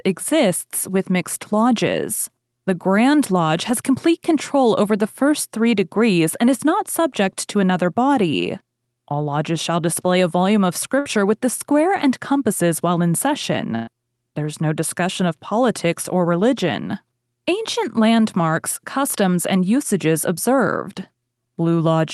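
Speech carried over an Opus call path, which caps the spectrum near 12 kHz, with two bursts of packet loss. One falls at 10.99–11.08 s, between "display a volume of" and "with the square and". The other falls at 13.75–13.90 s. Each time, the receiver stretches and fades the last sound (about 60 ms, then about 120 ms), which shows as a held, decaying copy of that sound before speech jumps ahead.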